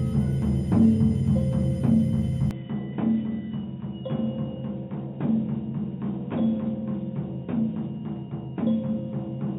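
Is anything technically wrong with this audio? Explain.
Yes. From 2.51 s to the end, the music abruptly turns dull and boxy. Everything above 3.8 kHz is gone, the level falls by roughly 5 dB, and a new, faint background noise appears, around 45 dB below the music. There is no gap at the changeover. This is likely an input switched to a poorer device partway through the recording. The replacement input passes a narrower band and has its own tone, gain and noise floor.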